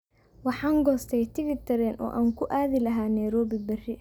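Speech recording; no technical faults detected at any point.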